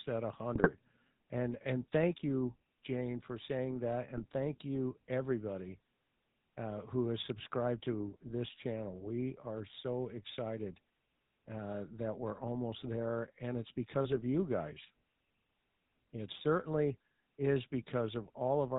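From start to finish the speech carries the GSM full-rate codec's character. The vocal tract is modelled as a filter and driven by a regular pulse excitation that keeps only every third sample. Nothing above 4 kHz survives, and the coarse excitation gives a plainly audible buzzy, gravelly roughness. All of this fits 13 kbps full-rate coding.

GSM bit errors break in three times. From 0.55 to 0.69 s the damage is heaviest, which points to a bit error rate of around 2 percent across roughly seven 20 ms frames. The second burst runs from 4.17 to 4.24 s, between "for saying that" and "thank you everybody". The third runs from 14.09 to 14.23 s, between "there and it's because" and "you guys", and sounds lighter per frame. In each burst, corrupted filter, pitch and gain values reach the decoder, so the spectrum warps and the level jumps. The speech briefly turns into squawks, pops and gargling.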